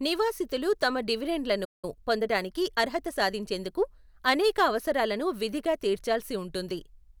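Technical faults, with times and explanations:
1.64–1.85 s, playback stall: the speech stops in mid-flow and the output goes silent for about 183 ms before resuming where it left off. The abrupt gap with a clean restart is what a stalled player sounds like. The likely cause is that the output ran short of data or its playback thread was blocked for that period, so nothing reached the output until it recovered.
1.85–3.67 s, time-compressed catch-up: right after the stall, the speech runs about 1.1 times faster for nearly two seconds while the pitch stays normal. The player is working off the backlog built up during the gap by cutting out small slices of audio and cross-fading across the joins. That shortens the material without transposing it, which makes the speech sound hurried.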